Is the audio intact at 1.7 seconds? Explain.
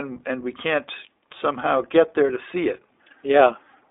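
No. At 1.7 s, as throughout the speech, the iLBC codec is at work, coding each 20 ms frame's excitation independently, with plainly audible rough, synthetic damage. A spectrogram shows energy confined to roughly 300 Hz to 3.6 kHz, with nothing above 3.7 kHz, consistent with 15.2 kbps iLBC.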